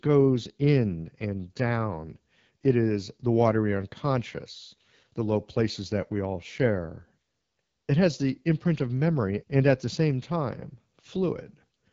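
Throughout, the speech sounds rough and raspy, with a buzzy, grainy edge and nothing above about 7.5 kHz. This is the AMR wideband (HD Voice) codec at a low rate, which fits 8.85 kbit/s: its vocal tract model is starved of bits, and the top band is only synthetic noise.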